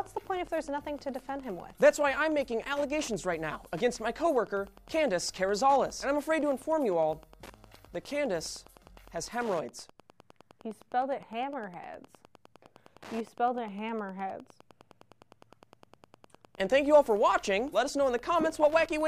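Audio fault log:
Throughout, Wi-Fi interference: a steady tick about ten times a second, roughly 25 dB below the sound. A nearby Wi-Fi radio's beacon, repeating every 102.4 ms, is picked up and rectified by the audio circuit, turning each burst into a click.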